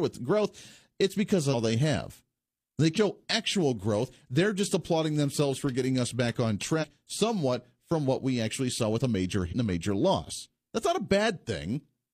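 Four spots of compressed frames skipped show up, at 1.49, 2.93 (right before "actual growth"), 6.78 (between "getting us back on" and "somewhat from what we") and 9.48 s (after "saw with a major"). Each time the decoder drops whole frames and jumps ahead, roughly a fifth of a second at the first two, about a tenth at 6.78 and around 150 ms at 9.48. The spacing fits frames of about 46 ms. Each join comes through as a sudden jump ahead in the speech.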